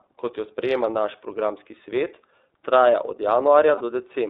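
iLBC codec coding runs through the whole speech recording. The band is held to roughly 300 Hz to 3.7 kHz, so the brightness and sibilance above that are missing. iLBC codes each frame's excitation on its own without borrowing from the previous frame, and here the frames are 30 ms long, which fits the 13.33 kbps mode. The damage is plainly audible as a rough, slightly synthetic texture across the voice.

Lost iLBC frames occur from 3.75 to 3.81 s, right after "programski svet traja od". The gap lasts about 60 ms, which fits two lost 30 ms frames. To fill it, the decoder repeats the last pitch cycle with added noise, so the loss sounds like a brief held, breathy vowel instead of silence. Because each iLBC frame decodes independently, the voice snaps back to normal almost immediately once packets arrive again.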